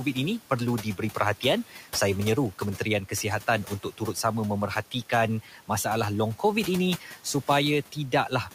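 Noise suppressor artifacts run through the whole clip. The suppressor pulls down the bands it judges to be steady noise by about 11 dB, deciding afresh each frame, so the room noise, sitting about 17 dB under the speech, drops away in the gaps and swells back beneath each phrase.

Speech cut by the noise suppressor happens four times, at 1.69 to 1.87 s, 3.65 to 4.16 s, 5.43 to 5.7 s and 7.0 to 7.25 s. In each stretch the suppressor mistakes quiet parts of the speech for noise and turns them down with the background, by about 9, 12, 10 and 8 dB at worst. Each loss covers only a brief fraction of a second, yet soft consonants and word tails there come out swallowed and faint, deepest around 3.65 to 4.16 s.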